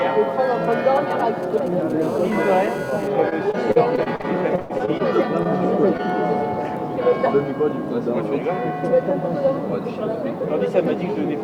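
From 0.65 to 1.92 s, GSM signalling bursts from a nearby 2G phone are rectified by the audio circuit. They come as a galloping dit-dit-dit of brief 217 Hz buzzes, roughly 20 dB below the sound, and are intermittent rather than continuous.

From 2.02 to 3.08 s, the same interference becomes a steady GSM phone buzz, as a phone in a call pulses 217 times a second. It is a hard, raspy, harmonic-rich tone at about 20 dB below the sound, unbroken and unrelated to it.

Between 3.29 and 5.01 s, repeated packet loss leaves a dozen or so holes, the longest about 0.1 s, covering roughly a fifth of the stretch. Each is patched by extending the previous sound, giving choppy, robotic audio with pieces missing.

Short concealed packet loss occurs at 5.43–5.47 s and 5.97–6.00 s. Each is an isolated gap of a few hundredths of a second, filled from the preceding audio, and heard as a brief smear or wobble rather than sustained choppiness.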